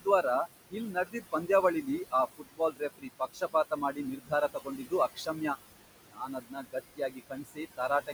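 Noise suppressor artifacts run through the whole recording. The room noise, sitting about 12 dB below the speech, is pulled down by about 19 dB in the gaps and rises again under each phrase, so the background pumps. On a spectrogram the noise floor appears as a speckled, blotchy haze that thins to near-silence between phrases and fills back in beneath the speech harmonics.

Speech cut by the noise suppressor happens six times, because the suppressor mistakes quieter speech energy for noise and gates it along with the background. It occurs at 0.71–1.5 s (deepest drop about 17 dB, roughly a third of a second affected), 2.38–4.32 s (about 21 dB, around a second in total), 4.48–4.93 s (about 20 dB), 5.14–5.42 s (about 18 dB), 6.06–6.76 s (about 21 dB) and 6.96 s to the end (about 21 dB). Soft consonants and word tails sound swallowed. The waveform shows abruptly shrunken envelopes, and the spectrogram shows dark holes where high-frequency consonant energy should be.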